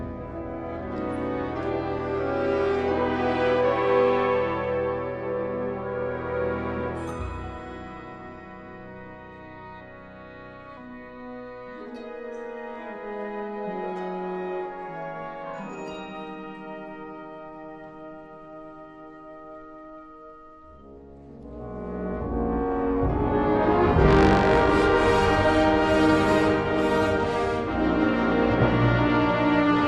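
Across the whole clip, the damage most likely comes from MP2 compression at a low bitrate, with the encoder short of bits for its 32 sub-bands. Starved of data, it switches upper bands off and quantises the remaining ones coarsely, so bands drop in and out from moment to moment. The sound is plainly dulled, with a gurgling, granular grit under it, which fits a rate around 80 kbps.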